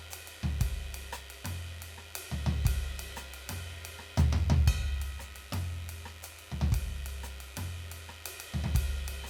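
From start to finish, a mains buzz sits under the music: a steady, raspy rasp locked to the 50 Hz supply, roughly 25 dB below the music. Sharp switching spikes from a dimmer, rectifier or unshielded lead get in twice per mains cycle, so a spectrogram shows an unbroken comb of horizontal lines at multiples of 50 Hz climbing into several kilohertz. A zoomed waveform shows narrow spikes repeating every 10 ms.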